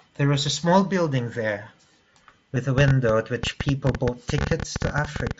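A speech clip carried over a Bluetooth headset link with the mSBC codec, whose wideband sound and light graininess on louder syllables are audible throughout, suffers concealed Bluetooth headset packet loss twice. Voice packets between headset and phone failed to arrive, and the receiver covered each gap by repeating the closest-matching piece of the waveform it had just received. At 2.55 s the gap is tiny, consistent with a single 7.5 ms frame, and passes almost unnoticed. From 4.42 to 4.45 s the hole is about 22.5 ms, suggesting three consecutive lost frames, and the patched stretch turns briefly buzzy and steady before a slight warble marks the return of real signal. Separately, a train of clicks runs from 2.78 to 5.32 s, likely caused by electrical interference from nearby equipment or a faulty connection or power supply injecting pulses into the path. Around thirty similar clicks arrive at an uneven pace averaging about 11.9 per second, peaking roughly 10 dB above the speech, and they tick audibly over the talking and through the pauses alike.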